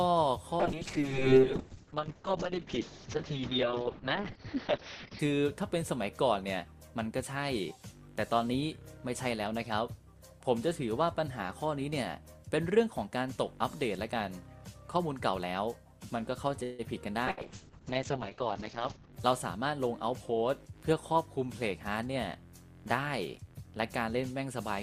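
From 0.62 s to 5.25 s there is a call bitrate drop. The encoder's rate falls from 48 kbps to 6 kbps and stays at the bottom for about 4.5 s. At that rate the coding turns coarse. The audio bandwidth shrinks from 20 kHz to 6 kHz. The sound becomes muffled and rough, with a watery texture. The top end returns once the bitrate climbs back.

At 16.63 s the sound stops moving forward for 153 ms. The last sound is stretched into a short buzz or hiss that trails off. It does not drop to silence. Then the audio picks up exactly where it left off, with nothing skipped. This is a call audio freeze. The likely cause is delayed packets leaving the jitter buffer empty. The gap pushes the rest of the clip later by that 153 ms.

A second call bitrate drop begins at 17.30 s and lasts until 19.18 s. This time the rate falls from 48 kbps to 7 kbps. The bandwidth narrows to 8 kHz. The muffled, grainy quality comes back for nearly two seconds.

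Inside that stretch, from 17.31 s to 17.40 s, there is a burst of packet loss. About 64 ms of concealment is played. It is a held, fading continuation of the last sound. Then the audio jumps ahead. Around 80 ms of the original is gone, so the sound lurches slightly forward.

From 18.78 s to 19.66 s there is a jitter buffer speed-up. The receiver is holding more audio than it wants. It trims short pitch-period slices again and again. Playback runs at about 110 percent. The pitch stays the same, but the sound feels hurried. Roughly a tenth of a second is cut away.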